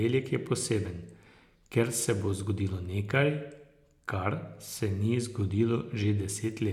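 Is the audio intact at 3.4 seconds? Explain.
Yes, the speech at 3.4 seconds is intact, with no dropout, click, distortion or other fault at that point.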